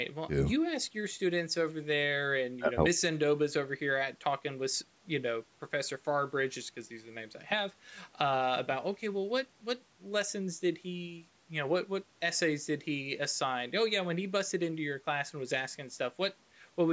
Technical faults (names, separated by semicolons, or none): none